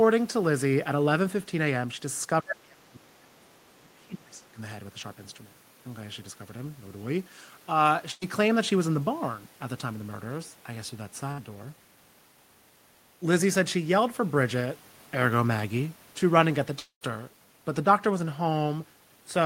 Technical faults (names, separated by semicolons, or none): speech suppressed in double talk; other side's voice leaking through; burst of packet loss; long network dropout